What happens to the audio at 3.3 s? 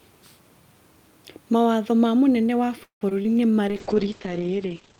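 Right after "ma mũnene wa" there's a short concealed packet loss from 3.22 to 3.26 s. About 20 ms of audio never arrived in time, so the receiver papered over it by extending the last sound and blending back in, which you hear as a quick smear.

Straight after, from 3.27 to 3.52 s, comes a jitter buffer slow-down. The receiver was building up its reserve by repeating tiny pitch-period chunks, adding 36 ms in total, so that stretch plays at about 88% speed with the pitch unchanged and sounds a bit drawn out.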